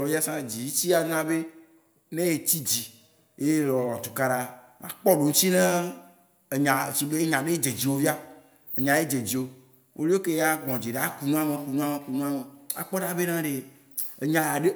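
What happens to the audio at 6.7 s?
Nothing goes wrong at 6.7 s; the speech there plays through intact, with no dropout, click, glitch or distortion.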